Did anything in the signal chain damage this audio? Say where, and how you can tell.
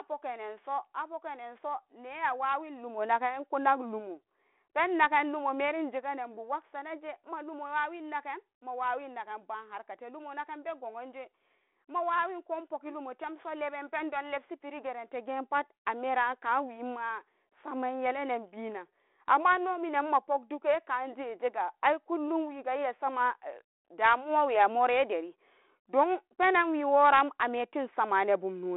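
No, nothing in the chain damaged this speech.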